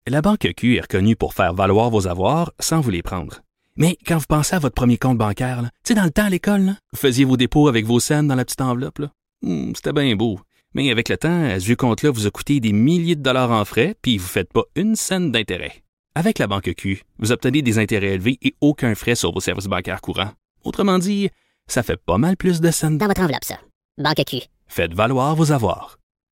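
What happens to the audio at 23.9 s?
A section at the wrong speed runs from 23.01 to 24.68 s, covering the moment at 23.9 s. For that stretch the speech plays back 1.45 times faster than it was recorded, so pitch and tempo rise together: the voice jumps about seven semitones higher and sounds high and hurried, then drops back to normal at 24.68 s. The likely cause is that this portion was rendered against the wrong clock during editing or playback.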